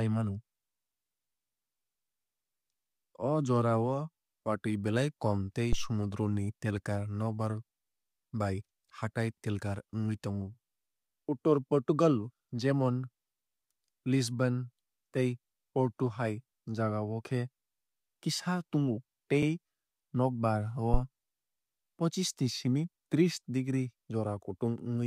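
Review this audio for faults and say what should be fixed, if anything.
There's a phantom power thump at 5.73 to 5.94 s and a shorter one at 20.94 to 21.02 s, decaying over about 47 ms and 18 ms. A supply switched on or off on a live input, and the voltage step pushed through the coupling capacitors. Don't toggle phantom power while the channel is open.

There's also an overlapping chunks fault at 19.43 s. The audio was handled in 10 s chunks, and this one restarted 50 ms early, so that slice plays twice as a quick stutter. Make sure each chunk starts exactly where the last one ended.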